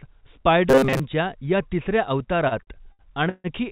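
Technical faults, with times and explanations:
0.70–1.00 s, robotic sound from repeated short buffers: right before "या तिसऱ्या" the voice goes into a stiff metallic buzz at 133 Hz. It's likely the receiver looping a roughly 7.5 ms chunk over most of that stretch.
2.48–3.47 s, repeated stalls (stutter): after "या तिसऱ्या" the audio catches five times, with about 300 ms of held-over sound and the longest hold at 150 ms. The jitter buffer kept running dry and got filled in, so nothing's lost, but the sound drags.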